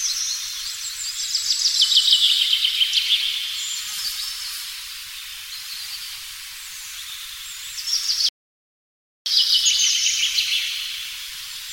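At 8.29 s the sound cuts off mid-flow and stays silent until 9.26 s, a gap of about 0.97 s, before it carries on. This is a playback stall. The likely cause is the player running dry of buffered data or its output thread being held up. On a waveform the trace drops abruptly to a flat line for nearly a second. A spectrogram shows a clean vertical band of empty space across all frequencies, with hard edges at both ends.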